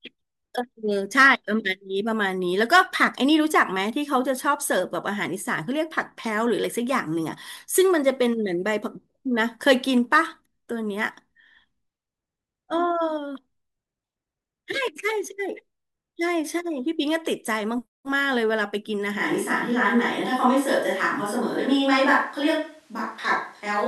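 A speech clip. At 19.2 s the sound switches abruptly to a distant microphone and stays there to the end. The voice turns roomy and hollow, with thinner bass, as if picked up from across the room. The level stays about the same. Background noise sits roughly 40 dB below the speech. The likely cause is that the close microphone's signal dropped out or went unused, leaving only a pickup placed further away.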